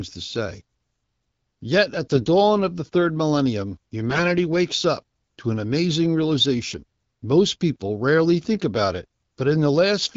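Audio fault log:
2.14 to 2.26 s and 4.07 to 4.21 s, AMR bit errors: the sound turns hoarse, scratchy and gargly for about 0.12 s and then 0.14 s, while pitch and loudness roughly hold. The lengths fit a handful of 20 ms frames whose weaker bits were flipped, a few percent of them, the second burst slightly heavier. Excitation pulses land in wrong places and fine gain and spectrum values drift. Lost frames would instead go quiet or smear, and the surrounding light AMR-WB coding stays clear.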